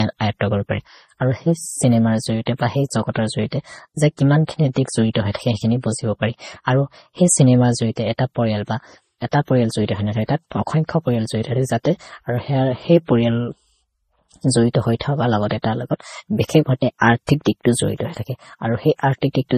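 A speech recording with a fault that runs the whole way through. The highs stop sharply, with nothing above about 14.6 kHz. Two distinct layers of compression damage sit on top of each other, their different artefacts heard together. This points to transcoding between lossy codecs, likely an MP3 at around 32 kbit/s later re-encoded to Vorbis at a similar rate. The second encoder spent its small budget on the first one's artefacts and added its own.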